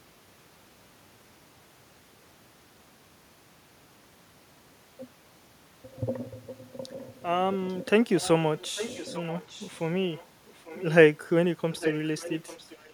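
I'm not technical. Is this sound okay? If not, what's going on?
No, there's an echo leak: a faint, delayed copy of the talking, about 0.84 s late, at 6.92, 8.19, 8.58 to 9.88, 10.12, 10.46 and 11.71 s to the end. It's likely a speakerphone whose echo cancelling didn't quite catch its own playback.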